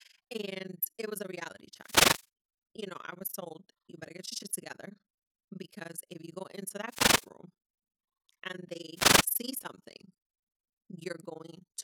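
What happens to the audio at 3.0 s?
At 3.0 s the speech is carrying overlap-add ripple, which runs through the entire clip rather than starting or stopping there. The audio was split into windowed frames and rebuilt with an overlap whose windows do not add up to a constant gain, so the level dips once per frame, by about 60 dB at its deepest. At around 20 Hz, this is heard as a rough tremolo chopping the speech.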